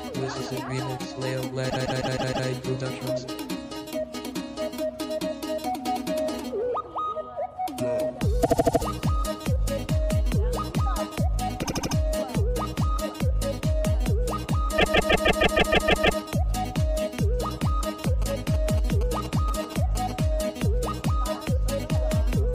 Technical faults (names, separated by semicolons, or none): repeated frames; GSM signalling bursts